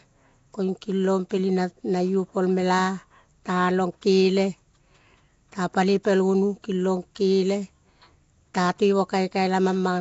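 Throughout, the speech carries a rough, hissy halo and smeared, underwater tone, with nothing above 7.7 kHz: likely Nellymoser compression, filling bare bands with noise.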